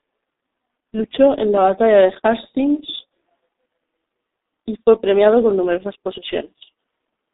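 Throughout the speech, G.723.1 codec damage is heavy: a low-rate model, consistent with roughly 6.3 kbit/s, smears consonants into a hoarse, muffled blur. A spectrogram shows nothing above 3.8 kHz, with coarse, blocky harmonics that change in steps.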